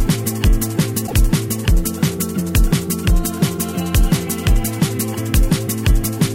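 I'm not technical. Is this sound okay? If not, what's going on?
No. At about 1.03 to 1.14 s there's a brief glitch, caused by damaged data in a compressed stream: the player hit corrupted bytes and briefly lost its place.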